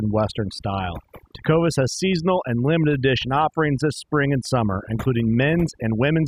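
Overdone noise removal runs throughout this speech clip, from start to finish. A noise reduction stage set far too aggressively is pulling individual frequency bands down hard or cutting them out whenever their level sits close to its noise estimate. The background therefore drops and breaks up into twinkling specks, while the quieter components of the voice get stripped away along with the noise.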